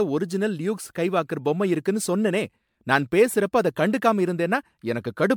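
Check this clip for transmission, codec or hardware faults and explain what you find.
The speech shows generation loss from start to finish. It sounds swirly and hollow, with a smeared texture. Consonant attacks blur instead of landing crisply. Nothing is present above 19.9 kHz, a band limit that fits an MP3 chain near 128 kbit/s. The damage is heavier than that rate alone would cause. The likely cause is repeated re-encoding, about ten passes. Each pass quantises on a shifted frame grid, so noise and spectral holes pile up.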